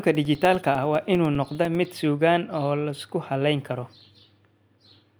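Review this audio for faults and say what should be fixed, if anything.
Periodic USB or driver dropouts run from 0.05 s to 1.95 s. About every 0.1 s, roughly 2 ms of the speech is replaced by silence, giving around twenty evenly spaced dropouts, heard as ticks. Something is stalling the audio path on a fixed schedule. To prevent it, find and remove the periodic task blocking the USB bus or driver, and enlarge the buffer.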